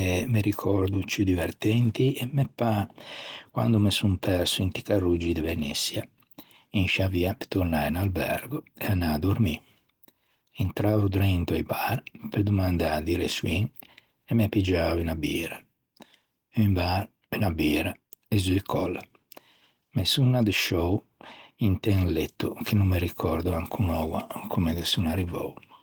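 Listening through this speech recording, nothing stood out as a technical problem.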